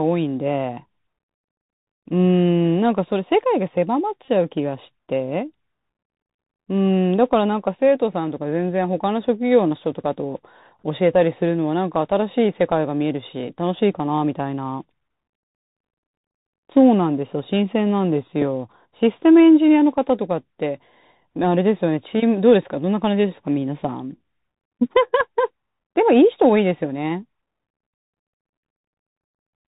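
This speech clip sounds dull and boxed-in throughout, with scratchy s sounds, harsh distortion on loud bright moments and a grainy hiss underneath. That is the Bluetooth CVSD headset codec: its one-bit, 64 kbps up-or-down coding passes nothing above 4 kHz and cannot track fast, loud changes. At 4.25 to 4.29 s a brief buzzy stutter is heard, a Bluetooth headset packet repeated in a broken run around 20 ms long, which fits several lost packets. At 18.42 s a single repeated packet leaves only a small tick.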